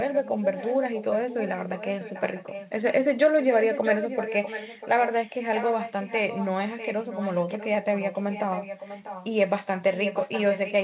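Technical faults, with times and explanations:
0.08–2.73 s, 3.42–5.30 s, 5.55–6.46 s, 6.64–7.67 s, 7.83–9.31 s and 9.93–10.84 s, echo leak: a second copy of the speech trails the original by 0.65 s, roughly 10 dB down, nearer 15 dB down at 6.64 s and only about 5 dB down at the end. The likely cause is a far-end loudspeaker whose echo canceller let residue through. On a spectrogram, each syllable's harmonic pattern reappears 0.65 s later, fainter. The waveform shows smeared, overlapping envelopes.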